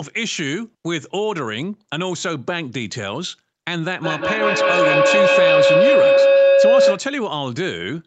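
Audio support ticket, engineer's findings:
Feedback howl, 4.02 to 7.16 s. Tone near 500 Hz swells to about 10 dB above speech level and pulses roughly every fifth of a second. Probable cause: two endpoints open in one room; the mic-to-speaker loop gains level on each pass and narrows to its favoured frequency. The howl persists until the loop breaks. Band-limited to 8 kHz along with the rest of the Opus call audio.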